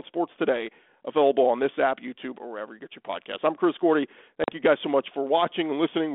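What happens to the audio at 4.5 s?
Packet loss on an ADPCM call cuts a hole from 4.44 to 4.50 s. About 40 ms of speech, roughly two packets' worth, drops to silence, and the decoder's adaptive predictor and step size lose track of the sender's. On the waveform it's a flat gap with hard edges; the spectrogram shows a clean vertical blank. The speech then resumes with brief distortion, a smear that settles within tens of milliseconds.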